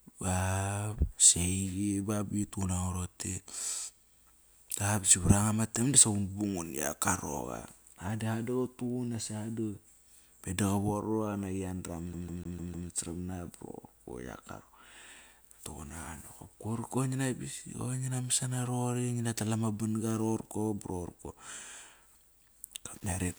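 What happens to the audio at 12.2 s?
At 12.2 s the speech is caught in a CD stuck on one turn, which runs from 12.13 to 12.89 s. A scratch keeps knocking the laser back one track at the same point on each rotation, so a 0.15 s fragment plays five times in a row, each time followed by a brief mute at the jump. Unlike a streaming or buffer loop, the repeats come at a fast, perfectly even rate of about seven per second.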